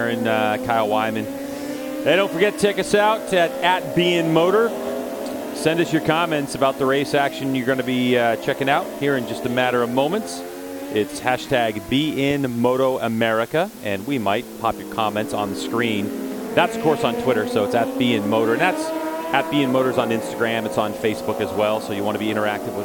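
From start to finish the audio carries low bit depth with dither: only 7 bits are used, and dither added before rounding turns the error into a steady, even hiss roughly 20 dB below the signal. A spectrogram shows a flat noise floor across all frequencies, and the waveform a constant fuzzy band.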